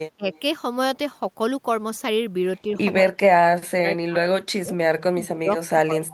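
From 0.16 to 0.29 s, the echo canceller likely could not tell overlapping talk from loudspeaker echo and turned the speech down with it. This is speech suppressed in double talk, and the speech dips by about 20 dB. From 0.33 to 0.4 s comes an echo leak, likely because a loudspeaker-side canceller let part of its microphone pickup through. It is heard as a faint copy of the speech arriving 186 ms late, roughly 35 dB below it. Double-talk suppression returns more deeply from 3.02 to 4.75 s, 5.11 to 5.55 s and 5.72 to 6.12 s, and the speech sinks by about 30 to 35 dB.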